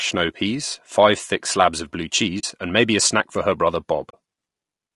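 Low-delay AAC compression runs through the whole speech clip. The voice sounds rough and grainy, with noise filling the gaps between the pitch harmonics and a thin, somewhat synthetic top band. The likely cause is AAC-ELD, the low-delay codec used for video calls. Its short frames resolve harmonics poorly and spend bits inefficiently, and the damage here is plainly audible and fits a bitrate around 32 kbps. AAC frame loss with muting occurs twice. The first is from 2.39 to 2.44 s, between "thick slabs of blue" and "and maybe a snack". The second is from 4.09 to 4.14 s, just after "snack for her brother". Each gap is 40 ms, consistent with two lost frames whose spectra the decoder replaced with silence. Because the overlapping windows fade the sound out and back in, each dropout is a soft-edged hole rather than a hard cut.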